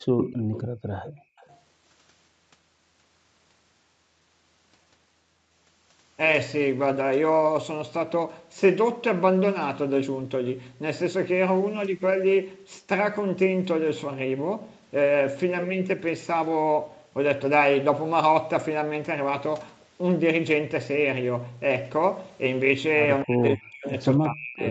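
From 0.01 to 1.41 s the room background dips and drops out in bursts, by up to about 26 dB and for roughly seven-tenths of a second in all. This is background gated by the echo canceller: it clamped the microphone down hard while the loudspeaker was playing.

Overlapping that opening, a delayed copy of the speech trails it by 255 ms, first from 0.18 to 0.62 s at nearly the level of the direct speech, then from 1.04 to 1.57 s much more faintly. That is likely an echo leak: the far end's echo canceller let part of its loudspeaker pickup through and sent it back.

From 23.24 to 24.66 s the talker's speech sinks and breaks up in pieces, falling by around 40 dB at its deepest and for about a second in total. The likely cause is speech suppressed in double talk: with both sides speaking at once, the canceller could not tell the talker from the echo and turned both down. Throughout, the audio stops at 8 kHz, the band limit of the call path.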